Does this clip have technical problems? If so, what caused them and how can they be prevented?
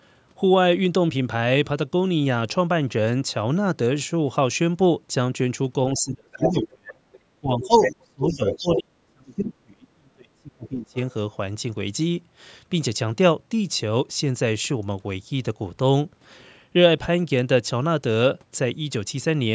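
Yes. Speech suppressed in double talk occurs at 5.92–7.04 s, 7.41–7.81 s, 8.01–8.43 s and 8.61–10.97 s. The talker's level falls sharply, by around 35 dB at its deepest, while another voice is present. The likely cause is an echo canceller that could not tell the local talker from loudspeaker echo during simultaneous speech and turned everything down together. Using a headset, or a canceller with better double-talk detection, would prevent it.

The other side's voice leaking through is heard at 6.33–6.68 s, 7.13–7.19 s, 7.63–7.96 s and 8.28–8.81 s. The first scrap is roughly as loud as the talker. The last two sit only slightly below, and the one at 7.13 s is far quieter. This is likely loudspeaker output reaching the microphone and surviving the echo cancellation, so it arrives as short fragments of a second voice. Headphones, lower speaker volume or stronger echo suppression would prevent it.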